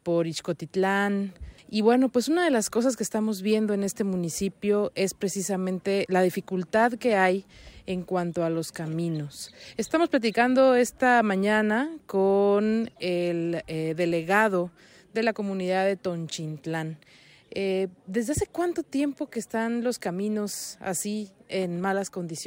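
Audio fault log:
Nothing stood out on a careful listen to this audio.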